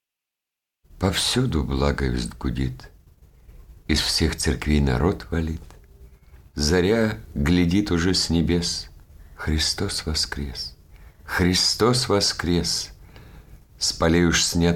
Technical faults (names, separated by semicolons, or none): none